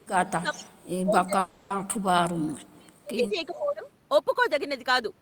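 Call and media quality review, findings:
Speech suppressed in double talk, 0.0–2.51 s and 2.73–3.86 s: voice dips by up to about 30 dB, around 3 s in total. Likely echo canceller attenuating near-end speech while the far end talks.

Echo leak, 0.55–0.62 s and 3.34–3.59 s: faint copy about 20 dB down, delayed 402 ms. Likely loudspeaker echo left uncancelled and sent back.

Call audio freeze, 1.39–1.72 s: 310 ms fill inserted, then speech resumes with nothing lost. Likely jitter buffer underrun from delayed packets.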